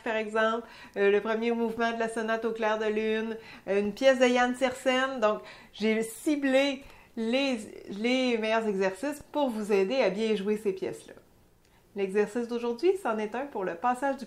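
Two brief corrupt frame decoded faults, at 1.51 s and 7.90 to 7.92 s, are short blips from damaged compressed frames, visible as thin vertical streaks.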